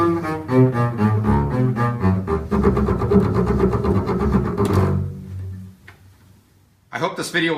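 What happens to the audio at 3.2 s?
Nothing goes wrong at 3.2 s; the audio runs through that moment intact, with no dropout, click, glitch or other fault.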